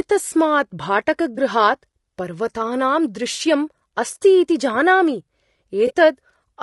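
Throughout the speech there is a rough, grainy texture, with noise filling the gaps between harmonics and a thin, synthetic-sounding top band. This is plainly audible codec damage, likely from low-delay AAC compression (AAC-ELD) at a rate around 32 kbps, whose short frames resolve pitch harmonics poorly.

At 1.35 to 1.38 s, 3.35 to 3.41 s and 5.87 to 5.92 s, brief smeared, noisy patches interrupt the sound. This is AAC frame loss with concealment: the decoder rebuilt the missing frames from the last good spectrum. The middle gap is longer, consistent with two consecutive frames lost rather than one.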